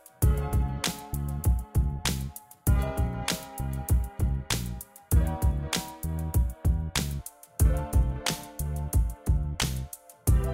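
Everyday sounds, with a wrong sample rate from 0.0 to 7.19 s: everything runs 1.09 times fast and about 1.47 semitones high, which fits 44.1 kHz audio played at 48 kHz. Speed and pitch rise together, unlike a pitch shift or time-stretch, which change only one.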